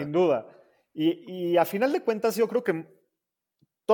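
Nothing technically wrong turns up anywhere in this short bit of speech.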